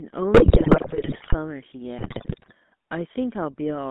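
The whole clip carries the sound of the GSM full-rate codec. The speech is buzzy, gravelly and rough. Nothing above about 3.5 kHz gets through, and the low end stops near 200 Hz. That narrow band fits a 13 kbps GSM phone line. The codec rebuilds the voice from a vocal-tract filter driven by a sparse pulse train. That thin excitation gives the grainy, buzzing texture heard here.

From 0.34 to 1.35 s, GSM bit errors break in. They return from 1.98 to 2.53 s. In both spans the speech turns into squawks, pops and gargling. Flipped bits on a weak radio link corrupt the decoder's filter, pitch and gain values. Each damaged frame comes out with a warped spectrum or a sudden jump in level. The first span is denser, with an error rate of about 7 percent against about 5 percent in the second.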